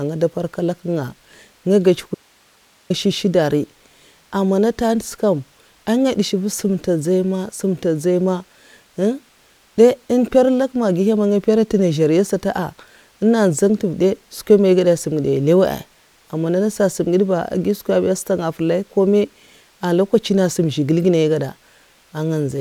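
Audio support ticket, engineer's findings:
Signal path likely lost its feed upstream while downstream stayed live: audio dropout to a faint residue, 2.15–2.90 s, 754 ms of hiss only, roughly 40 dB down, abrupt cut and return.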